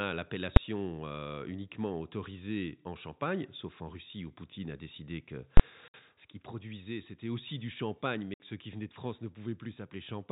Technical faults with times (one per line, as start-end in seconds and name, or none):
0.56 invalid numbers at full scale
5.57-5.60 invalid numbers at full scale
5.88-5.94 packet loss filled with silence
8.34-8.40 packet loss filled with silence